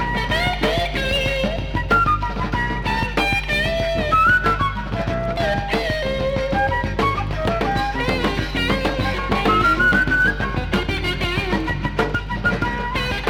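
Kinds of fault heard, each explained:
Mains hum: a steady, low drone sits under the whole clip, pitched at 50 Hz with some low harmonics above it. It is loud, only about 10 dB below the sound itself, so it stays clearly audible. The tone comes from the power line leaking into the signal path, most plausibly through a ground loop between connected equipment or from a transformer sitting close to a cable or input stage.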